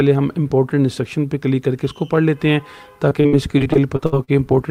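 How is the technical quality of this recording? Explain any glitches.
The recording has one glitch: repeated packet loss (robotic sound) from 3.09 to 4.30 s. Packets kept arriving late or not at all, and each hole was patched by extending the preceding sound. That makes nine short choppy gaps, the longest 62 ms, giving a broken, robotic texture with fragments missing.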